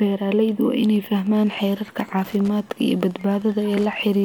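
Speech with Wi-Fi interference from 0.82 s to the end: faint ticking, well below the speech, repeats every 102.4 ms as the audio circuit rectifies a nearby radio's beacon. A spectrogram shows evenly spaced thin vertical broadband lines, and the waveform shows regular small spikes.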